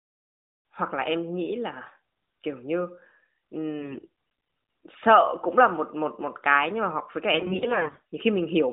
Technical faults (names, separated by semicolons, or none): AMR bit errors